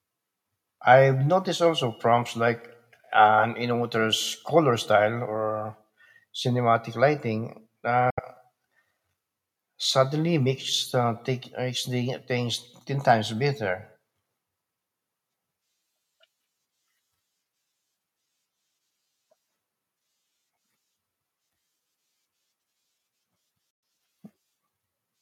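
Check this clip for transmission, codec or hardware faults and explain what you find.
Two short gaps in the speech point to a likely Bluetooth dropout. The first runs from 8.10 to 8.20 s, right after "style or cinematic lighting", and the second from 23.70 to 23.83 s. Packets apparently missed their delivery window to the headphones, so the output fell silent. Speech then resumed further along, skipping about 70 ms and 116 ms of sound respectively, which fits a handful of lost packets each time.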